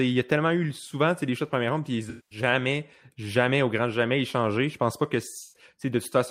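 At 2.09 to 2.39 s, just after "de première ronde puis", and again at 5.42 to 5.63 s, after "pense pas que", AAC frame loss with concealment smears the audio into a noisy, phasey patch. The decoder rebuilds each gap from the last good spectrum. The roughly 210 ms and 130 ms gaps fit about ten and six lost frames. On a spectrogram, each gap shows a blurred, stationary smear.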